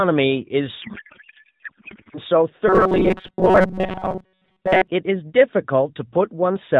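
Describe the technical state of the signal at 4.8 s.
At 4.8 s the speech is near the end of a robotic buzz from repeated short buffers, running 2.68 to 4.88 s. A rigid 188 Hz metallic tone follows the voice only roughly, likely from about 5 ms buffer segments being looped while most incoming audio is skipped, over the narrowband AMR telephone bandwidth.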